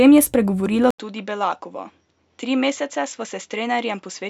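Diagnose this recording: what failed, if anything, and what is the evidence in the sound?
At 0.91 s an 80 ms gap, then duller, quieter speech with nothing above 7.6 kHz and new hiss: likely input switched to a poorer device at driver level.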